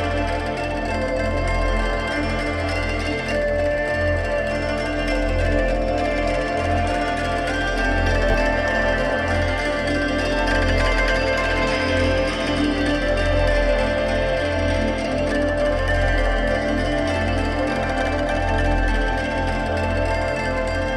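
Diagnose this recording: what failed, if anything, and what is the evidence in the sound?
Nothing failed: there is no evidence in the sound of a fault at any stage of this recording.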